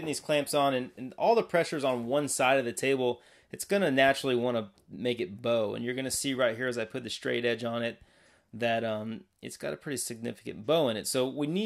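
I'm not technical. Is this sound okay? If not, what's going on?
Yes, nothing in this sound stood out as a problem when I listened.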